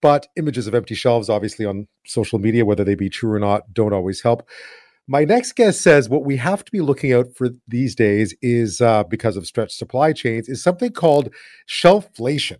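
A 50 Hz buzz rides on the speech from 10.8 s, right after "stretched supply chains is", and continues to the end of the clip at about 12.6 s. It is a resampler restarted on every block, which fits a conversion from 48 kHz down to 24 kHz. Each 20 ms block was converted in isolation, so the filter lacked the true neighbouring samples at every edge. The small error at each boundary repeats 50 times a second.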